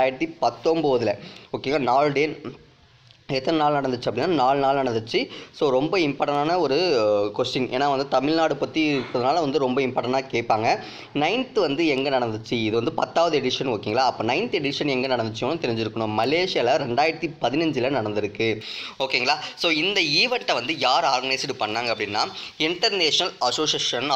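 From 18.61 s right through to the end at 24.15 s, the audio has pre-emphasis left on. The treble got boosted somewhere upstream for recording or transmission, and the matching de-emphasis never happened on the way back out. Up at 10 kHz it's sitting about 11 dB hotter than at 1 kHz, a tilt that fits a J.17-style curve. So that last stretch comes across thin and bright, with sibilance really poking out.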